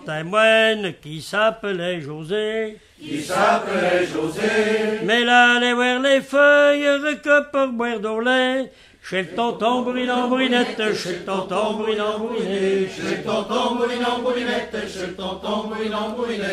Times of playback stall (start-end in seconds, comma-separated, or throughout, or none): none